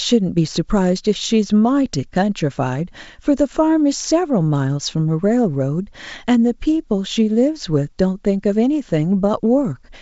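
Nothing stood out on listening to this speech, which comes across as ordinary wideband telephone audio.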